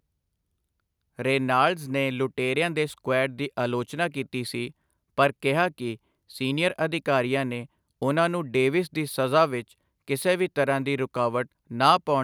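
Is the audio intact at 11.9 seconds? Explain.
Yes, the speech is intact at 11.9 seconds, with no audible fault at that moment.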